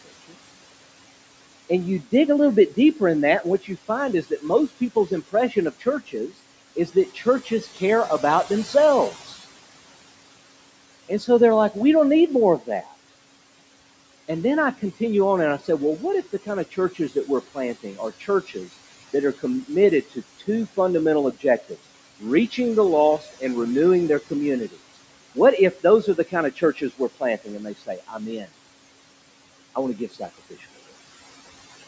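Noise suppressor artifacts run through the whole clip. The suppressor lowers the room noise by about 18 dB between phrases and lets it back up under speech. On a spectrogram this appears as a gated background floor, with the band ending at 8 kHz.

Speech cut by the noise suppressor occurs at 0.05–0.35 s, 1.69–9.4 s, 11.09–12.93 s, 15.59–28.49 s (just after "continue on and I") and 29.75–30.65 s. Quiet speech was treated as noise and dropped by about 15 to 18 dB, for roughly a tenth of a second up to about two seconds in total per stretch. These parts sound swallowed, and the waveform shows sudden dips in the envelope.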